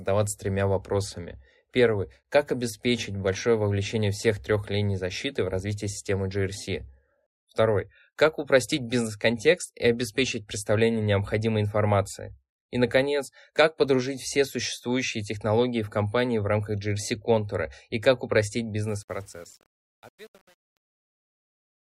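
From 18.88 s, just after "контура и как упростить", the closing fade-out around 19 s turns gritty. From 19.03 s to the end at 21.85 s, the tail is at its roughest and grittiest instead of thinning away cleanly. This is truncation distortion on a fade. The gain stage drops the low-order bits without dither, which fits an 8-bit path, so the waveform collapses into a few coarse square steps as the level falls.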